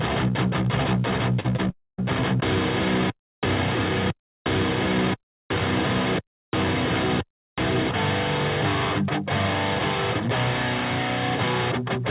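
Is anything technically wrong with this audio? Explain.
Yes. Three gaps cluster in under a second, heard over a call path with nothing above 4 kHz, which fits a narrowband G.711-type codec.

At 1.40–1.46 s and 1.56–1.60 s there is short concealed packet loss. About 40 ms and then 20 ms of audio arrived too late, and the receiver bridged each hole by extending the preceding sound before blending back. Each is a brief smear or wobble, not a gap. The sound keeps going throughout, which separates them from a dropout.

From 1.70 to 2.00 s the sound stretches into a fading buzz or hiss, then goes silent for about 0.23 s before resuming with that portion missing. This is likely a long network dropout. Unlike the short losses, concealment gives up here, leaving real silence rather than a smear.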